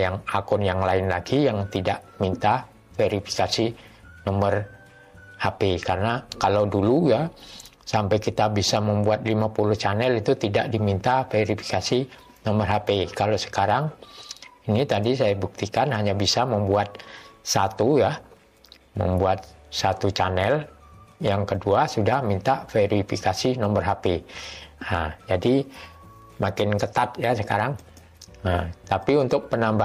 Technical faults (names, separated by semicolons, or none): none